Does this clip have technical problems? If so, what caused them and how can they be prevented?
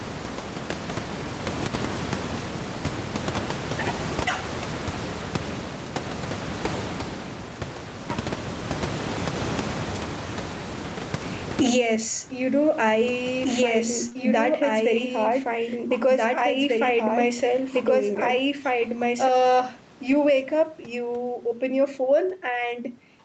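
Yes. Gain pumping runs through the whole clip, with the level swinging by something like 25 dB. The likely cause is input gain set far too high, with a fast limiter or compressor clamping down on each loud syllable and releasing in the gaps. This squashes loud and quiet passages together. To prevent it, lower the microphone gain so the limiter rarely needs to act.

A doubled audio track appears from 13.43 s to 19.29 s. A second, full-band copy of the speech runs about two seconds behind the original at roughly the same loudness. It has no reverb or room colouring, and it cuts in and out abruptly at both ends. The likely cause is a second, slower capture path or an edit that left two out-of-step copies in the mix. To prevent it, make sure only one capture path or clip feeds the mix at any time.

Short concealed packet loss occurs in two back-to-back holes of about 20 ms each, at 14.09 to 14.13 s and 14.13 to 14.17 s. 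Audio for those moments arrived too late for the decoder. The receiver bridged each gap by extending the preceding sound, either from its pitch or as shaped noise, and then crossfaded back into the real signal. The result is a brief smear or wobble. To prevent it, use a steadier network link or a larger jitter buffer.

A lost packet rebuilt from error correction follows immediately at 14.17 s and fills about 20 ms. It occurs again from 20.07 s to 20.13 s, just before "wake up", where the repair covers about 40 ms across two packets. In each case the missing audio was recovered from a low-bitrate backup copy carried in the next Opus packet. There is no gap, but those moments sound rougher and noisier than the audio around them. To prevent it, reduce packet loss on the link, since the error correction is already doing its job.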